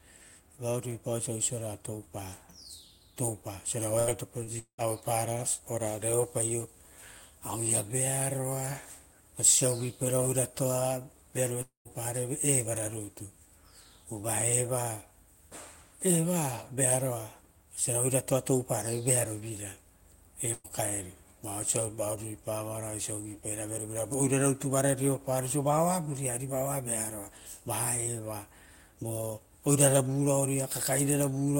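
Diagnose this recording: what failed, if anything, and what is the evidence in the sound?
Network stage, burst of packet loss at 3.99 to 4.10 s and 20.53 to 20.67 s. About 80 ms and 120 ms of speech never arrived. The decoder extended the last sound and faded it down, then resumed later in the speech with that stretch gone.

Network stage, short concealed packet loss at 4.43 to 4.50 s. Roughly 40 ms went missing, and the receiver papered over it by continuing the preceding sound before blending back. It is audible as a brief smear in the speech rather than a clear gap.

Network stage, long network dropout, at 4.59 to 4.81 s and 11.62 to 11.88 s. Concealment carries the last sound as a fading buzz or hiss, then goes silent for about 90 ms and 140 ms before speech returns. About 200 ms and 240 ms are missing, most likely from a network interruption.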